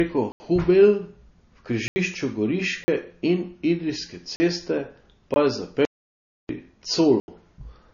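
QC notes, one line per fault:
Throughout: MP3 compression. Nothing is heard above 7 kHz, so the speech sounds dull. The codec damage is plainly audible as a watery, swirling texture. S sounds chirp and attacks smear. This likely comes from MP3 encoding at a low bitrate, which fits about 32 kbps. With so few bits, the encoder cuts the treble at a fixed point. It also drops weak frequency lines, which flicker on and off between frames.
0.32 to 0.40, 1.88 to 1.96, 2.84 to 2.88, 4.36 to 4.40, 5.34, and 7.20 to 7.28 s: block of digital silence. The audio snaps to silence and back with no fade. The gaps at 0.32, 1.88 and 7.20 s last 80 ms. Those at 2.84 and 4.36 s last 40 ms. The one at 5.34 s is 19 ms. The longer ones are short holes.
5.85 to 6.49 s: audio dropout to silence. The speech cuts out mid-flow for 640 ms and returns abruptly. The gap is silent with no room tone left in it. Whatever was spoken there is lost. 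This is likely the input signal failing for a moment while recording carried on writing zeros.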